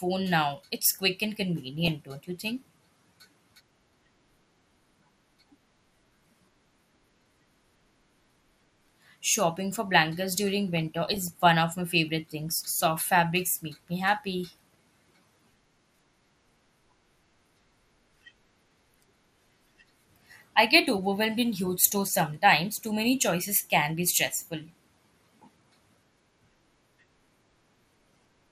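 It's a speech clip, and all the way through it sounds dull and plainly gurgly, with the top end switched off and a granular edge on what's left. That's likely MP2 compression starved of bits, which fits a stream of around 80 kbps. Then there are two bursts of DAB burbling, where bit errors slipped past error correction and put short blips of noise into single sub-bands. The first is brief, from 1.80 to 1.88 s, right after "quick and" and before "don't you think". The longer one runs from 10.77 to 11.28 s, between "for blankets during" and "one of my favorite".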